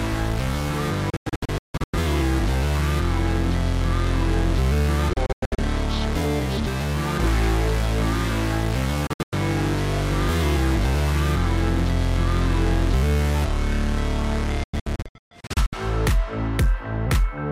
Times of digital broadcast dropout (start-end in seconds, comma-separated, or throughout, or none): 1.10-1.94, 5.13-5.59, 9.07-9.33, 14.64-15.73